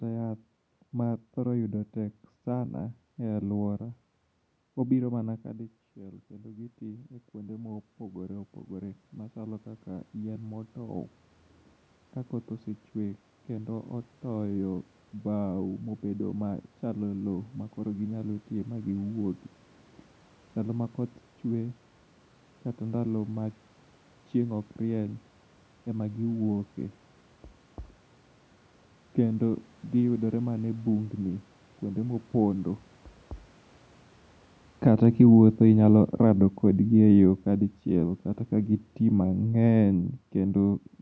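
From 34.71 s to 40.88 s the automatic gain falling fault takes hold: the call's gain control judged the input too loud or its background noise too strong, and eased its gain down by about 9 dB over roughly six seconds. The speech, where the talker moves at the microphone just before, sinks steadily, and the room noise sinks with it. On a waveform the envelope tapers smoothly, and on a spectrogram the whole band up to 8 kHz, noise floor included, fades evenly.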